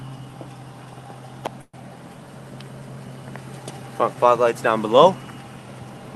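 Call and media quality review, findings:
Call audio freeze, 1.61–1.75 s: sound stalls, last moment stretched into a fading buzz for about 120 ms, ending in roughly 50 ms of silence. Resumes where it stopped, nothing lost, playback now about 120 ms later. Likely jitter buffer underrun from delayed packets.

Path audible as Opus-coded, top end limited near 12 kHz, fitting around 40 kbps.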